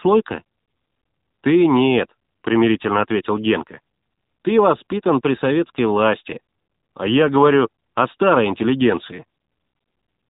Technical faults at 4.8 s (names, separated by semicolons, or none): AMR narrowband mobile codec